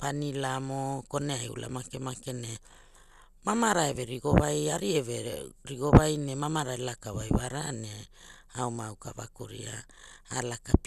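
Speech, likely squeezed through MP2 compression at a low bitrate, around 80 kbps, leaving nothing above 12.2 kHz, so the voice sounds dull throughout with plainly audible gurgling, granular distortion.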